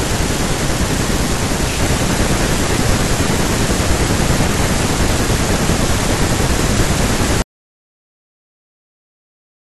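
At 7.42 s there's an audio dropout to silence: the speech cuts off mid-flow into dead silence, no room tone, right through to the end, likely a lost input or stray mute.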